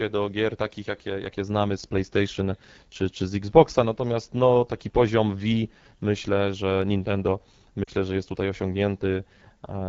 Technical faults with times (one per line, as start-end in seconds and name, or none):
0.00-9.88 AMR wideband (HD Voice) codec
7.84-7.90 lost AMR speech frames